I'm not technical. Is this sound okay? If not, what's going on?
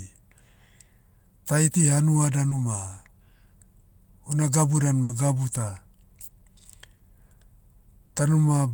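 No. The speech has gaps where bits of the call arrived too late.

Short concealed packet loss occurs at 2.49 to 2.53 s, 6.97 to 7.01 s and 8.05 to 8.11 s. Each time the receiver briefly stretched the previous sound to cover a hole of 20 to 40 milliseconds, so you hear only a quick smear or wobble.

A burst of packet loss at 5.03 to 5.11 s, between "una gabu dan" and "gabu ta", is longer. Several pieces in a row went missing, so the last sound was held for about 60 milliseconds as a fading buzz or hiss before the speech jumped ahead.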